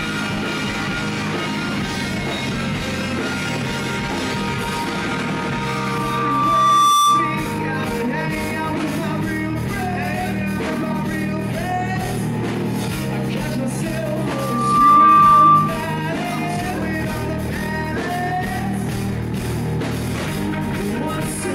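A steady tone near 1.2 kHz swells out of the sound from 5.66 to 7.54 s, taking about a second and a half to climb to a piercing whine roughly 10 dB above everything else. The same pitch returns from 14.25 to 15.91 s, rising faster, in well under a second. This is loudspeaker feedback squeal: the microphone was hearing its own loudspeaker, and at 1.2 kHz the loop gain passed unity, so that tone fed on itself.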